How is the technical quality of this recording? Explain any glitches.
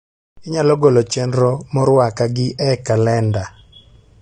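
The recording has one audible fault, present throughout: AAC compression damage.

The sound has nothing above about 9.7 kHz, and sibilants and sustained sounds carry a smeared, warbly, fizzy texture. This is likely AAC-LC coding at a low bitrate, where the encoder drops the top band and coarsely quantises what remains, so the speech comes across dull and processed.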